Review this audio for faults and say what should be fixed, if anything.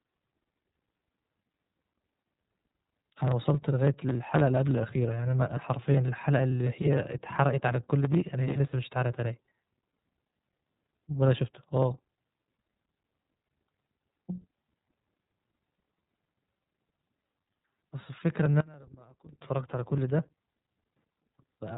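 iLBC codec damage runs through the whole clip. Nothing above 3.8 kHz survives, and the speech sounds rough and synthetic, which fits 30 ms frames at 13.33 kbps. Prevent it by using a wideband codec.

From 18.60 to 19.41 s the speech drops by about 27 dB to a faint residue. That is likely one channel inverted, with the two channels cancelling when summed to mono. Prevent it by checking channel polarity before any mono downmix.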